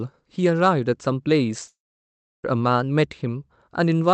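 Speech clip with a long network dropout from 1.67 to 2.46 s. A short fading buzz gives way to about 0.68 s of silence, and the speech resumes with that stretch missing rather than delayed. A likely lost run of packets explains this, not a brief concealed glitch.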